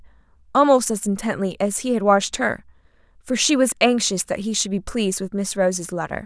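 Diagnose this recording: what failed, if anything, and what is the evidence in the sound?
Listening closely to the speech in this recording, nothing stood out as a failure at any stage of the chain.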